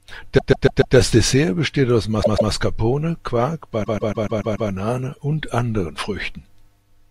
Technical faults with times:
0.37-0.95 repeated frames
2.22-2.51 repeated frames
3.83-4.69 repeated frames

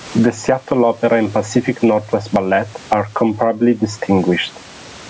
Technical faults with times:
0.00-5.09 gain pumping

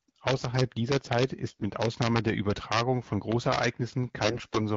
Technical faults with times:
0.00-4.77 integer overflow
1.49-1.62 AMR bit errors
4.23-4.58 AMR bit errors

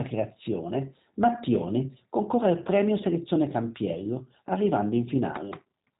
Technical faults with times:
0.00-6.00 G.729 codec

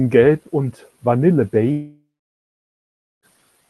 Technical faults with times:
1.71-3.25 long network dropout

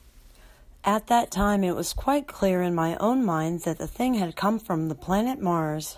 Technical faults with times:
none

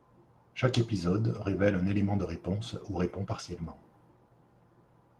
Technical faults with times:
2.19-2.25 lost packet rebuilt from error correction

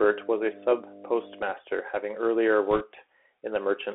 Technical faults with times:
0.00-3.94 Bluetooth CVSD headset codec
0.00-1.50 mains hum
2.71-2.83 bit errors on a Bluetooth voice link

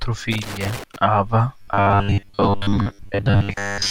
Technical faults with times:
0.32-0.96 loose connector crackle
1.62-3.91 robotic sound from repeated short buffers

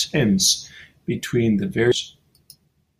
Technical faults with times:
1.91-1.96 stream segment skipped

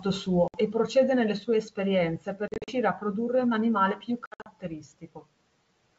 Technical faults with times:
0.48-0.58 packet loss on an ADPCM call
2.48-2.74 packet loss on an ADPCM call
4.26-4.47 packet loss on an ADPCM call

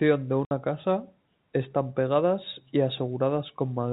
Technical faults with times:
0.45-0.51 packet loss filled with silence

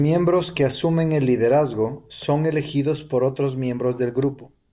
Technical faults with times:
none

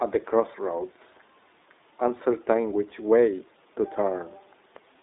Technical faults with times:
0.00-5.03 iLBC codec
2.90-2.94 lost iLBC frames

